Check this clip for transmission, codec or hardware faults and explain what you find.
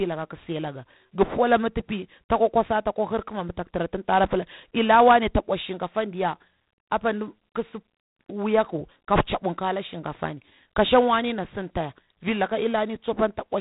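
There is one codec fault, present throughout. G.726 ADPCM coarsely codes each sample's difference from a prediction, consistent with 24 kbit/s. A rasping hiss tracks the speech level, and nothing passes above 3.8 kHz.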